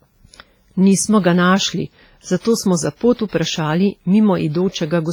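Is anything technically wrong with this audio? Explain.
Yes. Throughout the speech there's heavy damage, likely from WMA compression at a low bitrate around 24 kbps. Long transform blocks smear quantisation noise, giving ringing, washy sound and hiss that breathes with the signal.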